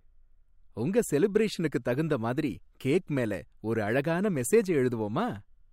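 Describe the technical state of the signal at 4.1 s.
At 4.1 s the speech signal is intact, with no audible fault at that moment.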